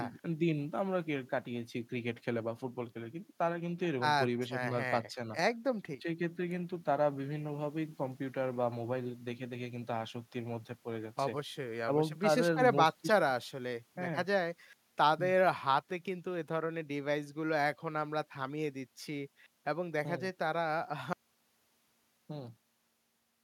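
At 21.13 s the speech cuts off mid-flow into an audio dropout to silence lasting the final 2.3 s. The gap is silent with no room tone, likely because the input signal was lost while recording continued, so that stretch is gone.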